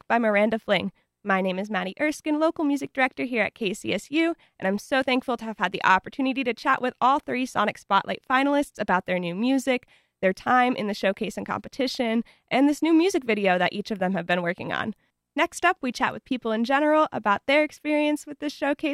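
At 2.87 s, just before "director here at", a single sharp click cuts through the speech. The cause is likely dropped samples. Roughly 0.7 ms of audio went missing, so the waveform jumps abruptly to a later value. Nothing audible is lost.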